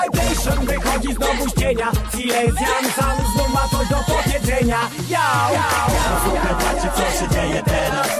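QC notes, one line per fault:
Nothing here caught my ear as a fault, so there's nothing to log for this one.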